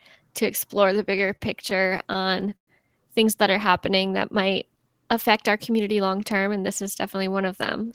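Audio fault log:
0.93–2.69 s, repeated stalls (stutter): just after "to explore", the speech catches and hangs sixteen times before resuming at "things that". Packets were reaching the receiver late, so its jitter buffer kept running dry, and each time it stretched the last sound to cover the hole, fading the longest, 110 ms, stall. Together those fills add 277 ms, about 16% of the span, while no speech is lost, which is why it drags and stutters rather than skipping.
5.72–6.15 s, jitter buffer speed-up: after "that might affect our", the speech rushes forward at about 110% of its normal rate, settling again by "term and this is". The buffer was holding more audio than it aims to keep, so the receiver trimmed away tiny slices, each a pitch period or so long, one after another, around 50 ms in all. Pitch stays put while the timing tightens, giving a hurried feel.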